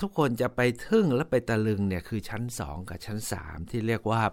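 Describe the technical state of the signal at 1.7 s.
At 1.7 s the speech signal is intact, with no audible technical fault at that moment.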